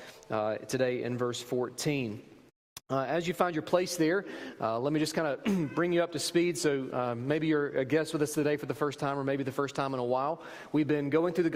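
No technical faults are audible anywhere in this audio.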